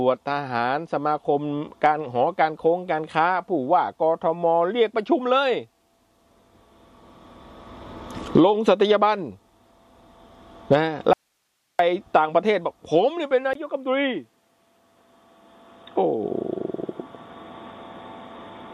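The audio cuts abruptly to faint hiss, about 50 dB down, from 11.13 to 11.79 s, an audio dropout to a faint residue, likely a brief signal loss on a still-live path. At 13.53 s a 20 ms silence gives way to duller, quieter sound with nothing above 3.8 kHz and its own noise about 45 dB below the signal until the end, likely as the input switched to a poorer device.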